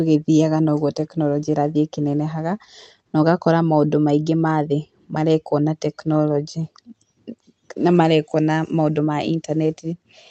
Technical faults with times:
none

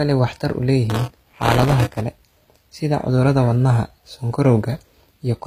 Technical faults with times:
0.00-5.47 HE-AAC compression
0.90-2.01 buffer tearing

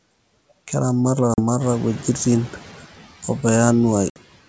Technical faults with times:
0.00-4.48 noise suppressor artifacts
1.34-1.40 packet loss on an ADPCM call
1.60-2.73 noise suppressor catching up
4.10-4.18 packet loss on an ADPCM call

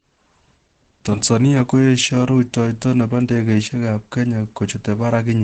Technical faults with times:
0.00-5.43 Opus compression

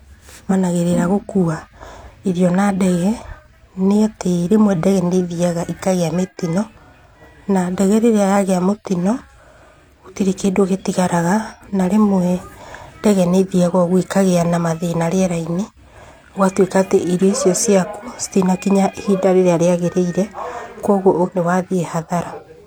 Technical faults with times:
0.47-0.52 damaged data in a compressed stream
21.23-21.29 damaged data in a compressed stream

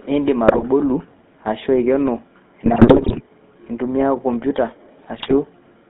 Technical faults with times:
0.00-5.89 GSM full-rate codec
0.46-0.63 GSM bit errors
2.66-3.21 GSM bit errors
5.18-5.34 GSM bit errors

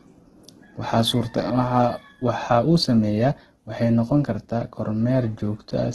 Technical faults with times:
0.00-5.95 Opus compression

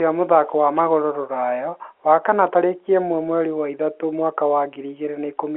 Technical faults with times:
none

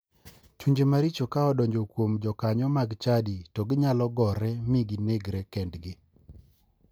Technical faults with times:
none

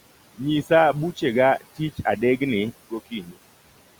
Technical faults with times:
0.00-3.99 mains buzz
0.00-3.99 noise suppressor artifacts
3.11-3.36 speech cut by the noise suppressor

